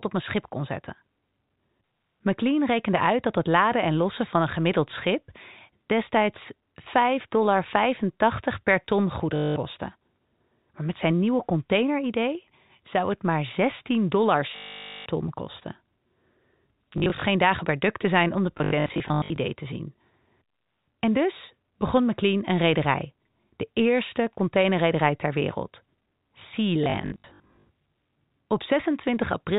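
At 9.36 s, after "per ton", packet loss with last packet repeated freezes the speech for 0.2 s. The receiver replays the last packet, which fits 20 ms packets. That produces a 50 Hz buzz. A longer freeze follows at 14.56 s, before "ton kosten", and a scattered, broken one at 16.98 s, before "geen dagen per duk". Broken stutters come at 18.58 s and 26.84 s. All of it sits on narrow telephone-band G.711 audio.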